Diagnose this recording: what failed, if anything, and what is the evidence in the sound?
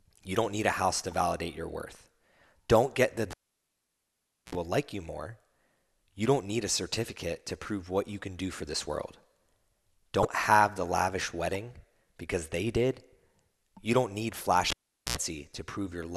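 Analogue wiring failed twice: a cable pulled and plugged in. At 3.31 s a pop drops the speech to near silence for about 1.19 s, then 68 ms of 60 Hz mains buzz as the tip alone touches, and a second pop at 4.55 s. It recurs at 14.70 s, gone about 0.42 s, with 82 ms of buzz before restoring at 15.17 s.

The codec stage shows damaged data in a compressed stream at 10.22 s: a brief blip of about 34 ms. Corrupted bytes made the decoder misread the frames there, lose sync and resume at the next frame header.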